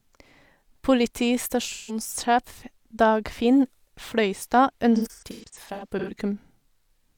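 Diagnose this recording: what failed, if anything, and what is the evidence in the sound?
The codec stage failed: AAC frame loss with concealment, where the decoder rebuilds missing frames from the last good spectrum. From 1.72 to 2.00 s the speech turns smeared and noisy for about 170 ms, which fits a few lost frames. A longer disturbance runs from 4.95 to 6.12 s, with roughly 600 ms of rebuilt audio scattered in separate patches, the longest around 150 ms, giving an intermittent phasey, washed-out texture.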